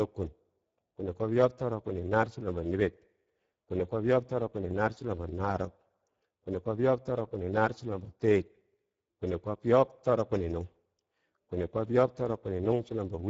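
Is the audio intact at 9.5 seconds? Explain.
No. Speex codec damage runs through the whole clip, including 9.5 seconds. Starved of bits for the excitation, this CELP coder leaves the speech plainly hoarse and noisy, consistent with a bitrate near 10 kbps, with nothing above 7.7 kHz.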